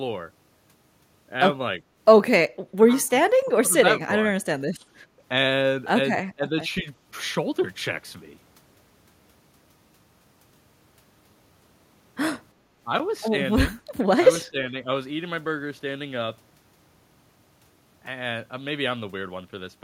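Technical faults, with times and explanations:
2.83–2.87, 3.24–4.14, 4.45–5.03, 6.35–6.52, 6.81–6.86 and 14.45–14.85 s, speech suppressed in double talk: the voice dips and thins, from a slight sag to nearly gone at 4.45–5.03 s. It's likely the canceller ducking everything while both ends talked over each other.
12.59–12.71 s, background gated by the echo canceller: the room tone drops by about 6 dB for roughly a tenth of a second, then comes back. The canceller clamped the mic while the far end played, then released.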